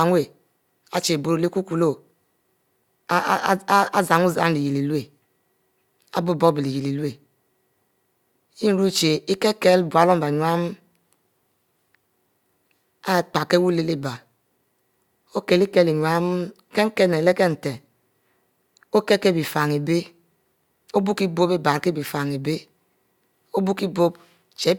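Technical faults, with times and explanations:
No audible technical faults.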